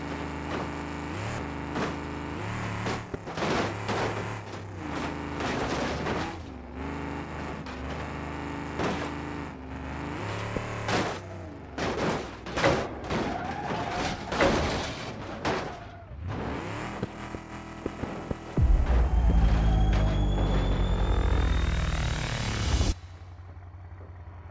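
Listening through the recording, nothing stood out as a technical problem at any point.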